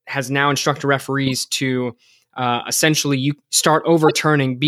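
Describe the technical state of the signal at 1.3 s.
A corrupt frame was decoded from 1.26 to 1.32 s: flipped bits, likely across about three frames, misplaced energy after "has now instructed", producing a glitch peaking around -10 dBFS.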